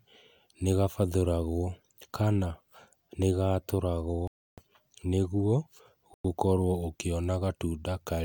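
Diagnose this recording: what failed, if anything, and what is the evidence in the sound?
Speech drops to silence for 0.3 s at 4.27 s, before "nĩguo gũkorwo", and 0.1 s at 6.14 s: likely Bluetooth stall, headphone buffer starved awaiting resent packets.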